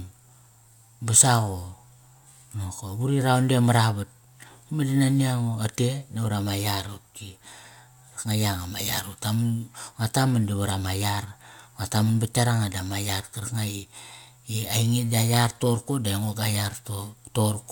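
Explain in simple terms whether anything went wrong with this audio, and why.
Nothing went wrong: no faults anywhere in the speech recording.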